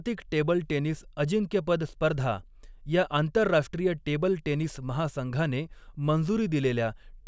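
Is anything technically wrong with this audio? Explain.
No, the speech signal shows no technical faults.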